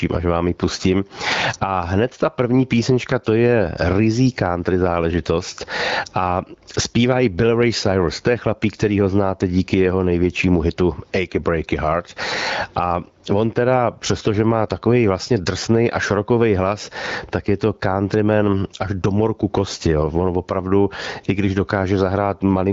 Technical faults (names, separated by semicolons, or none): gain pumping